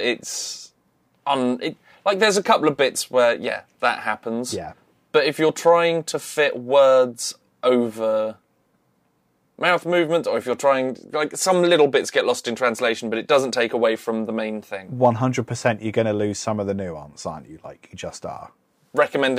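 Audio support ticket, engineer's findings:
No audible faults found.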